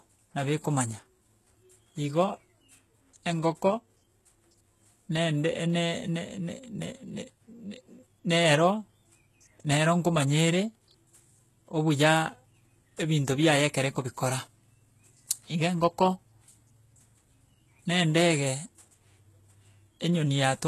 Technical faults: HE-AAC compression

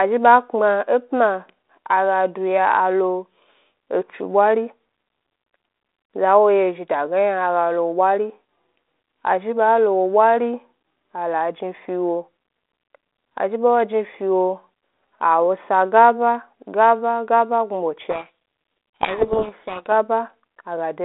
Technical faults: codec payload misread

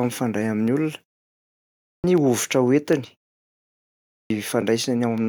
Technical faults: clipped start after a pause

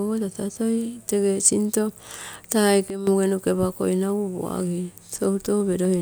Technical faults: sudden gain jump; periodic USB or driver dropouts

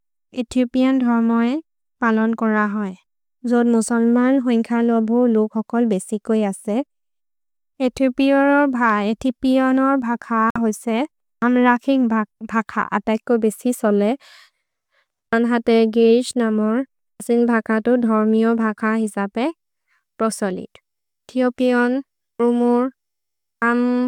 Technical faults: Bluetooth stall

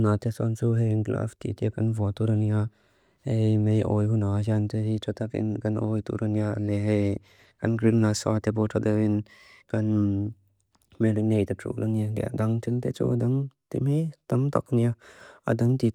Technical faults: none

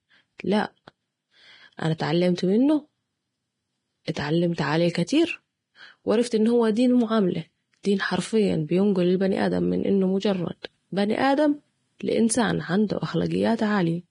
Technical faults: Vorbis compression; pre-echo

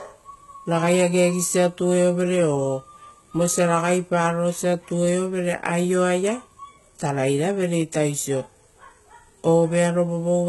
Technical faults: HE-AAC compression

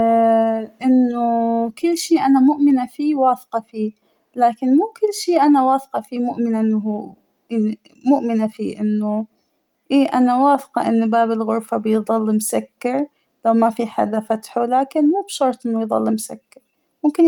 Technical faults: none

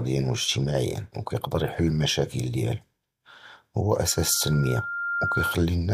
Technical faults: loudspeaker feedback squeal

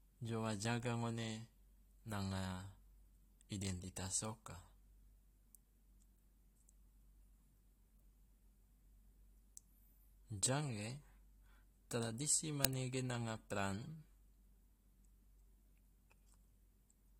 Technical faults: uninitialised buffer

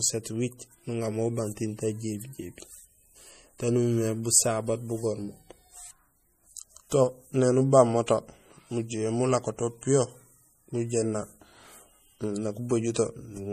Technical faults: MP3 compression

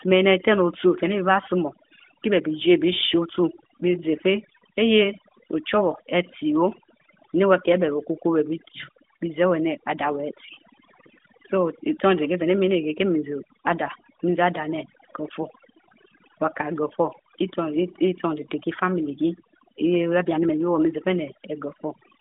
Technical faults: overdone noise removal

